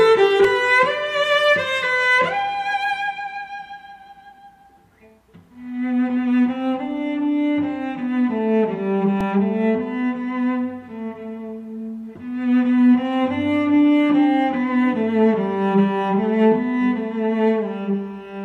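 At 0.44 s a repeated buffer occurs: fresh audio arrived late, so the device replayed its last block, here about 2.67 ms long (which fits a 128-sample buffer), twice more. Because the block is so small, it is heard as a brief click or buzz rather than a stutter. A single replay at 9.21 s gives another click or buzz. On a waveform each shows an identical tiny segment copied with a step at every join, and a spectrogram shows a thin vertical broadband line.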